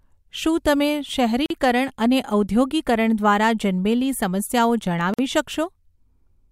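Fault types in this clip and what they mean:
gap at a join of encoded pieces: Twice the speech drops into a short silence and then resumes exactly where it stopped, first for about 43 ms at 1.46 s, just after "શું તમે", then for about 47 ms at 5.14 s. The edges are smeared rather than perfectly clean. The cause is separately encoded segments butted together without trimming, so each join keeps the encoder's leading delay and the padded final frame as dead air.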